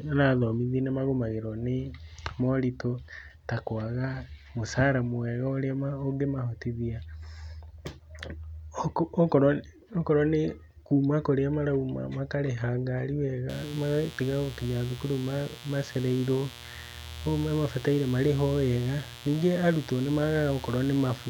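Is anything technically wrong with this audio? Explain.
Yes. From 13.49 s to the end, mains buzz sits about 20 dB below the speech. Sharp switching spikes, twice per 60 Hz cycle, leak into the signal path, producing a dense ladder of 60 Hz harmonics reaching into the kHz range and a steady, raspy buzz.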